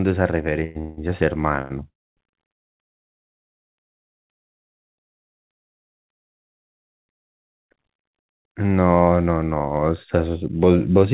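Packets likely held up in transit emptied the jitter buffer, producing a call audio freeze from 0.64 to 0.77 s and again from 0.79 to 0.99 s. Each time the last sound carries on as a fading buzz or hiss before the speech resumes where it stopped. At 1.61 to 1.72 s, a short stall from a late packet stretches one sound by about 89 ms, with a slight buzz or dip. Further freezes follow. From 1.88 to 2.19 s the sound holds only briefly and then drops to about 250 ms of silence. From 2.61 to 2.80 s there is a 170 ms silent gap. In every case the speech picks up where it left off, with nothing missing, heard through the G.711 mu-law call path's 4 kHz bandwidth.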